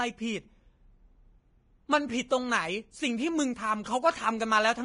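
Speech, heavily damaged throughout by what is likely Vorbis compression. Nothing survives above 10.6 kHz, and the remaining treble is replaced by grainy hiss rather than the metallic swirling of MP3, which suggests a bitrate near 28 kbps.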